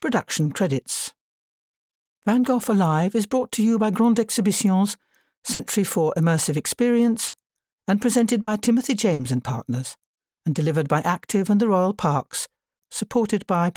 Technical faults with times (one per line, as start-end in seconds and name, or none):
5.53-5.62 burst of packet loss
7.27-7.36 burst of packet loss
8.41-8.50 burst of packet loss
9.13-9.22 burst of packet loss